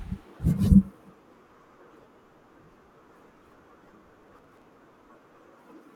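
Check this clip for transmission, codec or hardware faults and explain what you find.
One fault stands out, near the end of the speech.

Processor overload crackle, 4.23 to 4.66 s: the processor is falling behind and repeatedly missing deadlines for short buffers, roughly 10 ms each. About thirty are skipped outright, so the audio jumps over tiny hard-edged gaps, heard as a gritty crackling tear that stops once the load eases.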